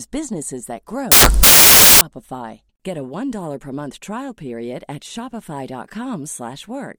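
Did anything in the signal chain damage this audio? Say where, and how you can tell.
Yes, at sample-format conversion. After "businesses that", from 1.12 to 2.01 s, loud white noise replaces the speech: samples built from the wrong bytes, with noisy low bits made dominant.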